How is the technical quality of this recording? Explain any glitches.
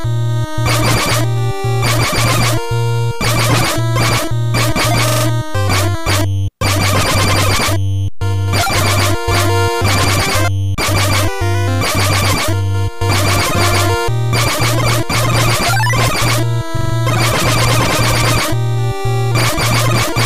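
The recording has three short stutters from a repeated buffer, at 5.08 to 5.25 s, 16.77 to 16.94 s and 19.41 to 19.46 s. New audio arrived late, so the playback device replayed its last block of about 43 ms, which fits a 2048-sample buffer. The first two play that block four extra times and the last plays it once more, each with a hard join. Unlike a dropout, there is no silent gap. The same fragment simply loops briefly, and little if anything is lost.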